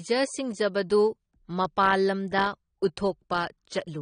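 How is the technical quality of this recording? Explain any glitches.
The speech carries plainly audible codec damage from start to finish, likely from AAC compression. Nothing is present above 9.7 kHz, so the top of the spectrum is simply gone and sibilants lose their crispness. AAC-LC splits the signal into 1,024 frequency lines per frame and spends bits only where a hearing model predicts they will be noticed. The starved bit budget, which fits a rate around 32 kbps, forces a lowered cut-off and coarse quantisation, leaving gaps in the spectrum or filler noise. The result is a dull, smeared sound with a warbling or fizzy texture on sustained sounds and sibilants. That texture tells it apart from a plain low-pass filter, which would cut the same highs but leave what remains clean and steady.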